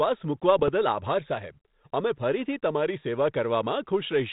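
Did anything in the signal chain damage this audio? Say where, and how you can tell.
Yes, bit errors on an ADPCM link in the transmission stage, from 0.59 to 0.69 s in this speech over 32 kbit/s G.726. Pops and a rough burst with level jumps appear. Each flipped bit corrupts the decoder's step size and predictor, so the error rings on. The waveform shows spiky, ragged excursions, and the spectrogram shows brief broadband smears below the 4 kHz ceiling.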